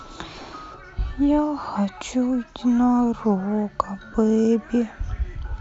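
At 0.34 to 0.44 s the speech briefly breaks into a grainy, hissing smear, a flutter of short gaps scattered across about 100 ms, each no longer than about 20 ms, adding up to around 60 ms. A shorter smear follows at 4.12 to 4.14 s, lasting about 20 ms. These are lost LE Audio frames. The LC3 decoder filled each gap by repeating the last spectrum with random signs, which turns tonal sound into noise, and the short gaps fit runs of 10 ms frames.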